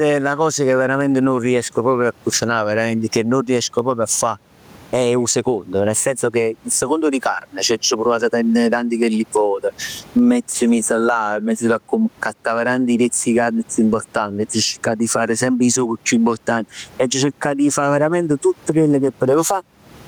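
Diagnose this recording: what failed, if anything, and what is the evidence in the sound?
Gain pumping runs through the whole clip. The room noise sits about 40 dB below the speech in the quietest gaps. The swing is roughly 15 dB. Loud and soft passages sit close together in level, and the speech sounds squashed. The likely cause is input gain set far too high, with a fast limiter or compressor in the call processing pulling it down on every peak.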